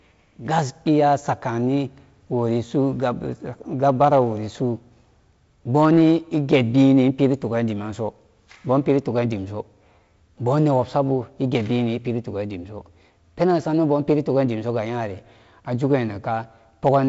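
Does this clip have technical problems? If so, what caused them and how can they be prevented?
Yes. A gain stage overdriven by about 3 dB caused hard clipping from 16.86 to 16.97 s, flattening peaks into a brief harsh crackle. Lowering gain to leave headroom prevents it.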